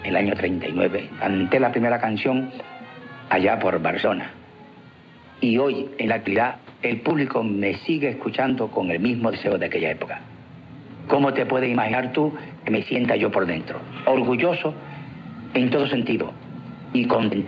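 Nothing here calls for a fix: the sound comes through a call path working as it should, with the top end stopping at about 8 kHz, which fits a wideband call codec.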